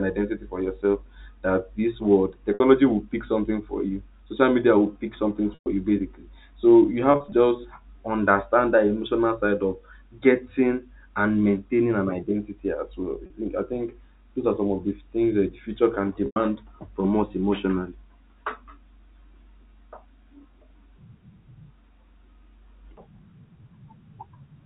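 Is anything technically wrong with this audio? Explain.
Yes. Five brief dropouts sound held and buzzy when short and fade into silence when longer: at 2.54 s, between "this world" and "will pick something for" (60 ms); 5.54 s (120 ms); 7.12–7.32 s, after "you basically so you" (120 ms scattered, longest gap 40 ms); 13.26 s (40 ms); and 16.26 s, before "from us emotionally" (100 ms). This is packet loss with pitch repetition: the receiver loops the last pitch period to cover the missing audio, which fits 20 ms packets, over the band-limited telephone sound.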